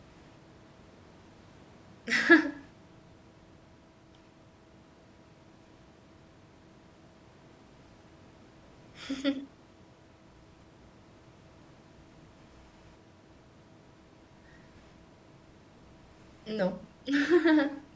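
No faults found; the speech carries the usual call microphone processing, with the lowest bass filtered out and nothing above 8 kHz.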